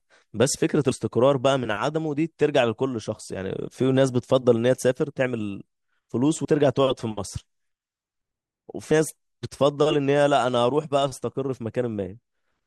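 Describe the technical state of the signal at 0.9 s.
A break at 0.91 s, with the speech jumping ahead by about a tenth of a second: compressed frames skipped, a few whole frames (which fits 32 ms frames) dropped.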